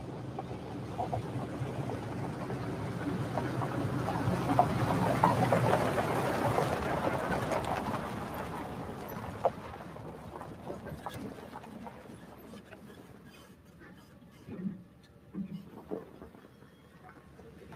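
No technical faults can be heard in this recording of sounds at any point in the clip.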